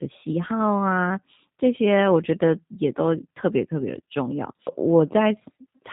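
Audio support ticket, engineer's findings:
G.729 codec path, whole clip. Voice channel carried over the low-rate CELP codec: speech rebuilt from a vocal tract filter, a pitch predictor and a few pulses per subframe, not the actual waveform. Result: plainly audible damage, rough, slightly synthetic timbre. Nothing above 3.8 kHz, so speech sounds muffled and narrowband. Roughness and bandwidth fit G.729A at 8 kbit/s.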